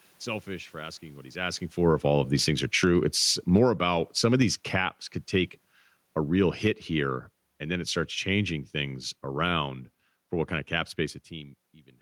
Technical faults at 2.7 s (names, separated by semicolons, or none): automatic gain falling